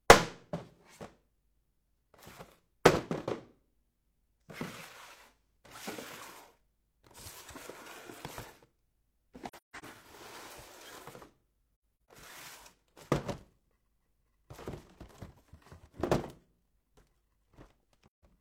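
AAC frame loss with muting opens soft-edged holes at 9.49–9.85 s, 12.07 s and 18.07–18.23 s. Missing frames were decoded as silence, and the overlapping windows fade sound out and back in. Spectrograms show full-band vertical gaps with tapered edges, and waveforms show smooth dips.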